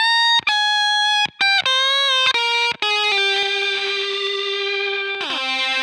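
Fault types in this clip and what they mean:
Channel delay (doubling): from 3.43 s to the end, one channel of this sound runs late by about 93 ms, which fits a 4096-sample buffer, and when the two are folded to mono the late copy stands apart as a slap echo at equal level. On a waveform each transient appears twice, 93 ms apart and equal in height; a spectrogram shows every onset doubled as a matching vertical stripe.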